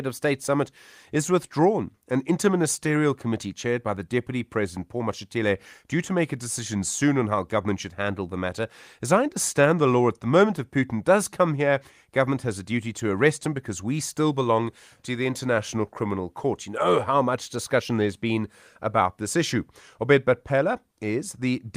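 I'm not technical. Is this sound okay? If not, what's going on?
Yes, this one's fine: nothing goes wrong anywhere in the recording, so there's nothing here to worry about.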